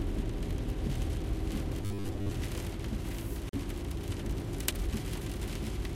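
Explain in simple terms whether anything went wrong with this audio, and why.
Between 1.82 and 2.31 s, the audio likely arrived too slowly, so about half the time short 10 ms pieces were repeated, producing robotic sound from repeated short buffers: a rigid 100 Hz buzz. From 3.49 to 3.53 s, a Bluetooth stall likely held up the wireless data, so the sound drops out for 39 ms before continuing.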